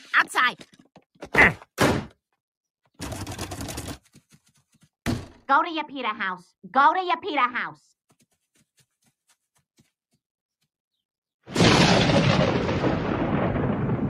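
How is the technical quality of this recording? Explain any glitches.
The technical quality holds up, with no glitches to explain.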